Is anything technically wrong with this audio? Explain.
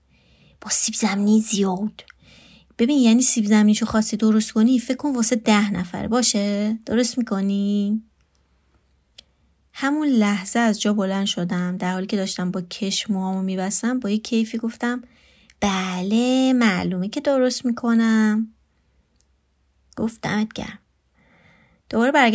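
No, nothing technically wrong here.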